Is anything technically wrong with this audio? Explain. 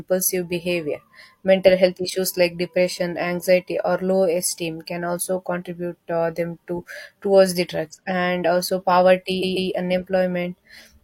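Yes. Around 9.38 to 9.66 s, the speech shows repeated frames. A short block of about 139 ms plays three times in a row, so the same fragment is heard twice more than it should be. This happens when a run of compressed frames is written or sent more than once, and the decoder simply plays each copy. The block length fits a few codec frames. The result is a brief stutter, and the clip runs about 279 ms longer.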